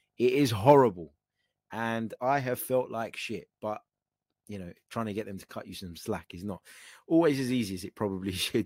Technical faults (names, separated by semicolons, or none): none